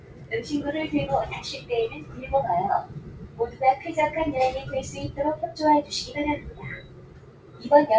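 A speech-tuned noise suppressor was left running over the whole clip of everyday sounds, treating steady and lingering sound as noise. Sudden onsets get through, but the level keeps swinging by roughly 20 dB, so things pump and thin out rather than sitting still.

There are four spots where the noise suppressor cut the sound harder: 0 to 0.32 s, 2.01 to 2.19 s, 2.86 to 3.61 s and 6.4 to 7.64 s. Each dips by about 8 to 9 dB, with held sound sagging and tails chopped short. Underneath, the call path carries nothing above 8 kHz, which fits G.722.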